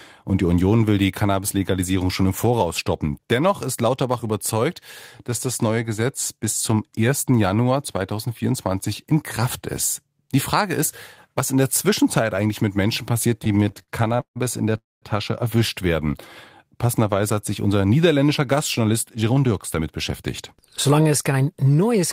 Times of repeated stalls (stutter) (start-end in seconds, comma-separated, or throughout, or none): 13.39-14.38